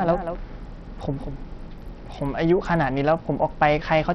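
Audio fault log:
Throughout, Bluetooth SBC compression: the treble thins and flickers while a gritty, grainy noise and aliasing cling to the speech, the sound of a coarse sub-band codec with too few bits for its upper bands. The heavy damage likely fits a low-bitrate link around 64 kbps.
0.00–1.66 s, doubled audio track: a second full-band copy of the speech trails the original by roughly a fifth of a second, around 10 dB quieter, with no decay or room colour. It is already running as the clip opens and cuts off abruptly at 1.66 s, likely from a slower second capture path.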